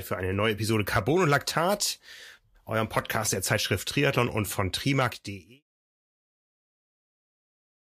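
Nothing goes wrong in this speech clip; the level just eases down in a smooth editor's fade-out from around 5 seconds to 5.64 s, with no click or hard edge at the end.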